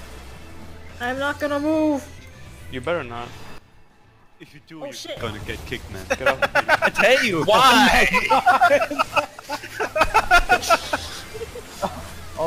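At 3.58 s the level drops abruptly by about 14 dB, and recovers at 5.17 s. At 9.2 s it falls by about 6 dB until 10.01 s. Sound and background noise step together. Each is likely a sudden gain jump, applied without a ramp.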